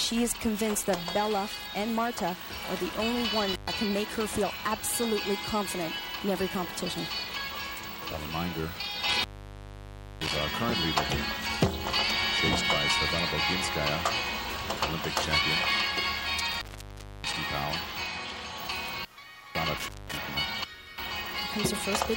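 Intermittent contact breaks the sound four times: at 3.52 to 3.68 s (open for about 118 ms), 9.10 to 10.36 s (about 974 ms), 16.52 to 17.34 s (about 626 ms) and 19.78 to 20.17 s (about 205 ms). A loose plug or cable briefly loses its connection, so the signal drops out, with crackle as the contact opens and closes and only hiss left while the line is open. The longest gap is nearly a second.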